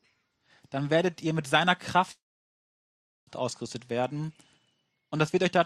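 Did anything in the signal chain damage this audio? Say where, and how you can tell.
Yes: a call audio freeze, likely delayed network packets emptying the jitter buffer. From 2.11 to 3.30 s the sound fades to silence, then resumes intact, 1.16 s late.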